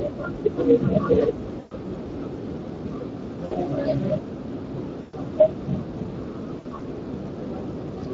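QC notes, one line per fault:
Throughout: Speex codec. The coding damage is plainly audible across the whole clip: the speech has a grainy, hoarse edge, because the CELP coder rebuilds each frame from a filter and a coded excitation and has too few bits to capture the fine detail. The texture fits a Speex mode around 20 kbps. On a spectrogram, harmonics look smeared and the spaces between them are filled with a noisy haze. The waveform looks normal.
1.59–1.74 s, 3.45–3.56 s, 5.01–5.16 s and 6.59–6.81 s: VoIP packet loss concealed by the speech codec. Audio went missing for about 120 ms, then 60 ms, then 120 ms. In the last window, about 120 ms was lost in runs of up to 60 ms spread over 200 ms. The decoder filled each gap by repeating its last pitch and filter at falling gain, so the speech turns into a brief buzzy or coloured drone that fades out. The speech stays weak for a moment after the gap. 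On a spectrogram, flat, stretched harmonic bands fade out. In the waveform, the envelope drops smoothly rather than cutting to silence.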